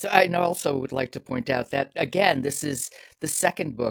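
Overlap-add ripple runs through the whole speech clip. The audio was split into windowed frames and rejoined with an overlap that fails to sum to constant gain, so the level swings by about 11 dB once per frame, roughly forty times a second, giving a rough flutter.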